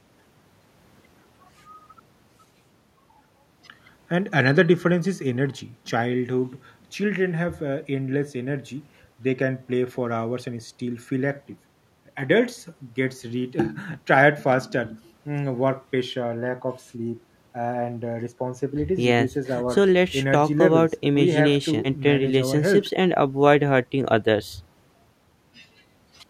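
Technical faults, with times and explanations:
Nothing technical stands out here; the speech runs along steadily with no faults to point to.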